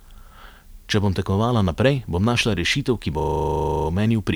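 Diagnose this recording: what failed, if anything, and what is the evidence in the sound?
A system hang loop at the driver or buffer stage runs from 3.2 to 3.88 s. A single 40 ms slice of speech repeats exactly seventeen times, giving a rough stuttering buzz at 25 Hz. The host stalled while the audio hardware kept replaying the same ring buffer, which points to a buffer of about 40 ms. The waveform shows identical 40 ms blocks tiled end to end, and the spectrogram shows regular vertical striping with repeated, unchanging columns.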